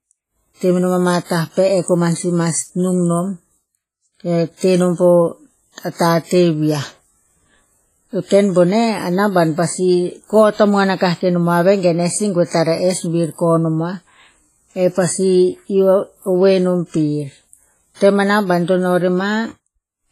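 From the start, the speech has a ringing, washy quality, with a hiss that swells and fades along with the voice. This is most likely WMA compression at a low bitrate, with the heavy damage fitting something around 24 kbps. Long transform blocks smear quantisation noise across tens of milliseconds, and weak spectral lines are zeroed. A spectrogram would show nothing above 15.3 kHz, patchy holes in the upper bands, and smeared grey noise around loud syllables.

At 1.24 s, lasting until 1.30 s, an attack is preceded by a short burst of hiss, and the onset itself sounds soft and blurred. This is pre-echo. The attack fell late in a codec block, so noise sized for the loud moment was spread back across the quiet 57 ms before it. On a waveform, a low fuzzy smear would appear ahead of the sharp rise. The spectrogram would show a broadband wash over that same span.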